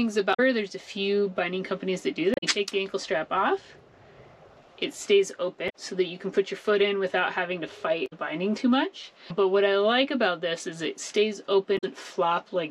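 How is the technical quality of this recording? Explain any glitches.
The technical quality is poor. Damaged data in a compressed stream appears at 0.30, 2.34, 5.66, 8.03 and 11.74 s: corrupted frames make the decoder lose sync and hunt for the next header, producing brief 0.1 s glitches such as chirps, clicks or short holes.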